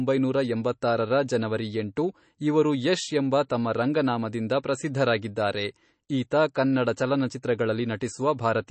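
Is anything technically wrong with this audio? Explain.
Yes. Throughout the speech there is nothing above about 8.3 kHz, and the audio has a watery, swirling quality with smeared consonants. This is likely MP3 compression at a low bitrate, around 32 kbps. Short of bits, the encoder cut the treble and let weak frequency components flicker between frames.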